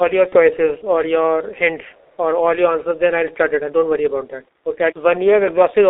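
From the start and throughout, the speech sounds muffled and hoarse, with dull, smeared consonants and a thin telephone quality. There is nothing below about 300 Hz or above about 3.7 kHz. This is the G.723.1 codec, heavily degrading the signal. The coarse, boxy texture points to a rate near 6.3 kbit/s. Its long 30 ms frames and slowly updated voice model cannot keep up with fast changes in the speech, so detail and crisp onsets are lost.

From 0.29 to 0.37 s, the sound briefly turns into a flat, buzzy smear that fades rather than continuing naturally, and it stays weak just afterwards. This is VoIP packet loss concealed by the speech codec. The gap fits one lost 30 ms frame. The decoder filled it by repeating its last pitch and filter settings at falling gain, and because each frame depends on the previous one, the following speech needs a moment to recover.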